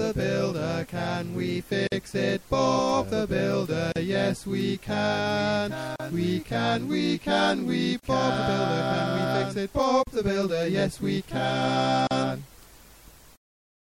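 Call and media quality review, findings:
Watery, swirly texture throughout, with metallic chirps on sibilant and cymbal-like energy and smeared attacks. Likely MP3 compression at a low bitrate; the damage fits roughly 64 kbps. Mechanism: encoder short of bits zeroes weak frequency lines, which flicker on and off frame to frame. Plainly audible across the whole clip.

Gap at a join of encoded pieces, six times: 1.87, 3.92, 5.96, 8.00, 10.03 and 12.07 s. Dropouts of about 48 ms at the first, about 38 ms after. Regular, one every 2.0 s. Edges smeared, with the sound resuming where it stopped. Probable component: chunked encoder or segmenter. Mechanism: 2 s pieces encoded separately and joined untrimmed, so each keeps its start-up delay and end padding as silence.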